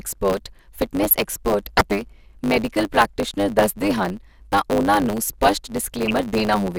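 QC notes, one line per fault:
Throughout: block size mismatch (truncated), each block's tail discarded, giving a 100 Hz buzz and speech running 1.09 times fast at near-normal pitch; spectrogram shows 100 Hz harmonic lines.
1.03 to 1.81 s and 6.08 to 6.15 s: DAB burbling, bit errors corrupting sub-band samples, short blips of noise in single sub-bands; spectrogram shows isolated frequency bands flickering frame by frame.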